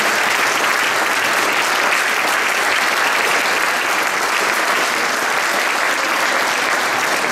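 Listening through the whole recording, nothing stood out as a technical problem at any point.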